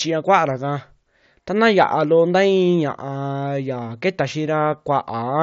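Nothing faulty here; the speech comes over a Bluetooth mSBC headset link, carrying only that path's ordinary character.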